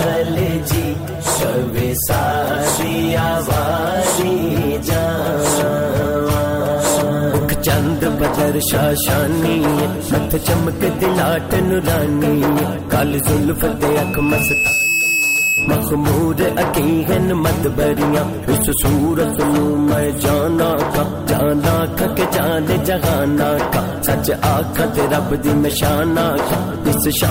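At 13.9 to 15.84 s, loudspeaker feedback squeal: a microphone-to-speaker loop exceeds unity gain at 2.6 kHz, swelling over about a second to roughly the programme level.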